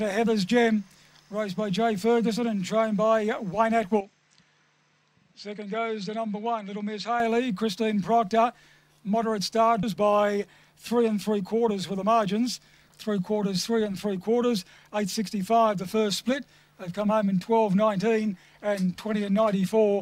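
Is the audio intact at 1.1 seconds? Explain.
Yes, at 1.1 seconds the audio plays through cleanly, with no dropout, click, distortion or other fault at that point.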